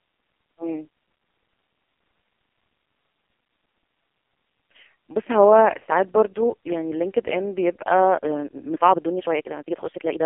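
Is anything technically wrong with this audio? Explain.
Yes. AMR narrowband mobile codec damage runs through the whole clip. The speech was squeezed through a low-rate vocal-tract model that rebuilds each short frame from a few pulses, which points to AMR-NB's lowest 4.75 kbps mode. Nothing passes above 4 kHz, the band sits roughly between 250 Hz and 3.4 kHz, and the heavy coding leaves the voice buzzy, thin and synthetic.

A time-stretched section runs from 8.15 s to the end, where delivery suddenly jumps to about 1.63 times the earlier pace while pitch stays unchanged. This is likely software fitting audio to a length by dropping short pieces, so this stretch sounds rushed.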